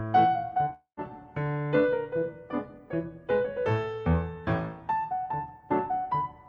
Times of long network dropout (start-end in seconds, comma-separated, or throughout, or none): 0.73-1.00